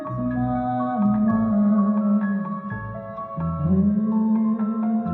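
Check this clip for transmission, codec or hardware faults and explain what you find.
No fault turns up anywhere in this clip. Listening through it, there is nothing of the kind the question asks about to report.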